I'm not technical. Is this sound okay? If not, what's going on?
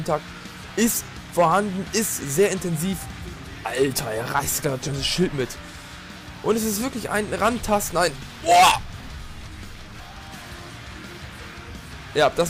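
No. Hard clipping runs through the whole clip. The sound was pushed louder than the recording chain could carry, so the tops of its loudest moments were sliced off flat. That adds a harsh, fuzzy crackle on every peak, though only a small fraction of the sound is affected.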